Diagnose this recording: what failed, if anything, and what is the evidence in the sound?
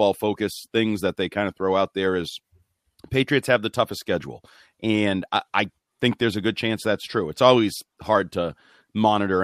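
Nothing failed: there is no evidence in the sound of any fault at any stage of the recording.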